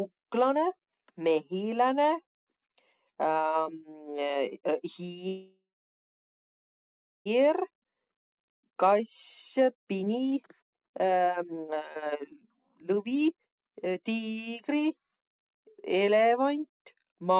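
From 5.28 to 7.28 s the speech stalls in a call audio freeze. The last sound is briefly carried on as a fading buzz or hiss, then about 1.6 s of silence follows, and the speech resumes exactly where it stopped. That is the mark of a jitter buffer that likely ran dry while packets were held up in transit. Unlike a dropout, nothing is lost. The whole pause of about 2 s is added delay.

That backlog is then cleared by jitter buffer speed-up. From 7.62 to 9.00 s the rate rises only to 107%, trimming roughly a tenth of a second. From 9.59 to 15.44 s it climbs to 132%, removing about 2 s in total as many short pitch-period slices are cut out. The speech sounds rushed, but the pitch stays put. That sets it apart from a playback-rate or resampling error, which would raise the pitch along with the speed. Throughout, the G.711 call path keeps everything below 4 kHz.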